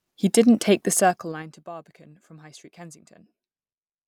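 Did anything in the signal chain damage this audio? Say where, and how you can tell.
Yes. A gain change was applied in coarse, unsmoothed steps at the driver or buffer stage, producing zipper noise from 0.85 to 1.66 s, just after "didn't take". The level drops by about 25 dB in jumps of about 3 dB, at roughly ten per second. Each jump is a small discontinuity in the waveform, so instead of a clean fade, a ticking, zipping texture rides on the speech for as long as the level is moving.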